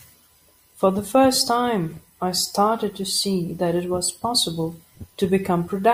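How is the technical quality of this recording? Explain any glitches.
No audible technical glitches.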